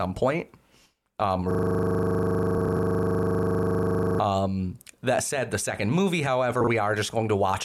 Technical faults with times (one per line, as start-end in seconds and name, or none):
1.51-4.20 system hang loop
2.58-2.77 frames out of order
6.61-6.67 frames out of order